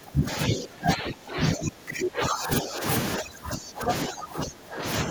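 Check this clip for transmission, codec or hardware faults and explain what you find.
One fault kind recurs: speech suppressed in double talk, at 0.0–2.83 s, 3.17–3.91 s and 4.07–4.85 s. The voice dips by roughly 20–25 dB, likely from an echo canceller ducking during simultaneous talk, appearing as sunken waveform stretches.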